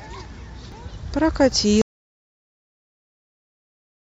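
At 0.72 s the speech jumps abruptly, skipping ahead by roughly 70 ms, and a smaller jump of about 20 ms follows at 1.52 s. These are most likely dropped buffers (overrun): the capture software failed to read its samples before the hardware overwrote them, so a stretch of audio vanished and the sound on either side was spliced together with no gap.

From 1.82 s the audio drops out to silence and stays that way until the clip ends. The cut is sudden and mid-flow, and what follows is silence with no room tone beneath it. That points to a likely lost input, such as a disconnected device, a broken link or an unintended mute, while the recorder kept writing silence. Anything spoken after that point is gone.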